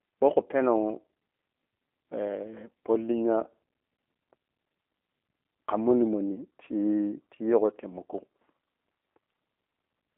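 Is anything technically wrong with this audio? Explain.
Yes. The speech carries G.729 codec damage from start to finish. The codec rebuilds each 10 ms frame from a vocal tract filter, a pitch predictor and a few pulses, so fine detail is lost. Here the damage is plainly audible as a rough, synthetic edge. The line band runs from 250 Hz to 3.6 kHz, and nothing sounds above 3.8 kHz. That thin, narrow sound fits an 8 kbit/s stream.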